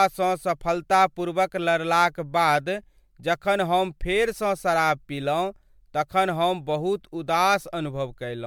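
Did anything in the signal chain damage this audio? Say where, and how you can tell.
Yes, at the codec stage, across the whole speech clip. It sounds like generation loss, likely from being MP3-encoded and decoded around ten times. Nothing is present above 19.9 kHz. The sound is swirly and hollow, with smeared consonant attacks, worse than a single pass at a moderate bitrate near 136 kbit/s would give. Each new pass quantised on a shifted frame grid, so noise and spectral holes kept stacking.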